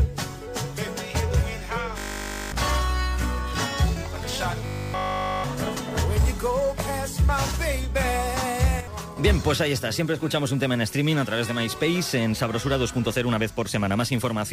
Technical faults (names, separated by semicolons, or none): robotic sound from repeated short buffers